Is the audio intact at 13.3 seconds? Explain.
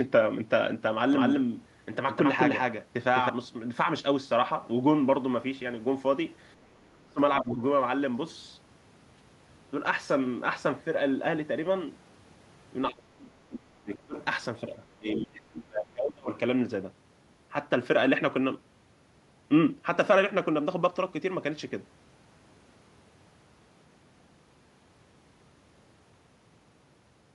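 No. Speech suppressed in double talk runs from 12.9 to 14.15 s, likely because an echo canceller mistook overlapping talk for echo, so the speech dips by roughly 35 dB at its deepest.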